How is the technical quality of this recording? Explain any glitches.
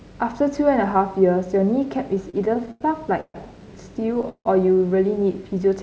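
The recording has three glitches: two stretches of stutter and one short freeze. The sound has no content above 8 kHz, which fits a wideband call codec such as G.722 at about 64 kbps.

Repeated stalls (stutter) occur from 2.30 to 2.83 s and from 4.00 to 4.47 s. Each stretch has six small gaps. Packets arrived late, and the jitter buffer kept running dry. Each time, the receiver stretched the last sound until data came. In the first stretch, 166 ms were filled, about a third of the span, and the longest gap was 96 ms. The second is worse: 212 ms filled, nearly half the span, with a 161 ms longest gap. Nothing is lost, but the audio drags and stammers.

A call audio freeze sits between 3.21 and 3.36 s. The sound stops moving forward and holds for about 136 ms. The last fragment is carried on, then fades, with about 60 ms of silence. The likely cause is packets held up in transit, which emptied the jitter buffer. 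When they arrived, playback resumed where it had stopped. Nothing is missing, but everything after it is 136 ms later.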